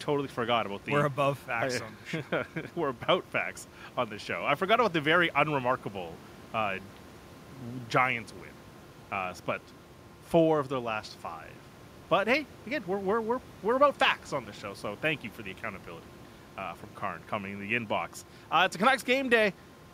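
No technical faults can be heard in the speech, and the only background sound is the room noise picked up by the microphone, which sits about 25 dB below the voice.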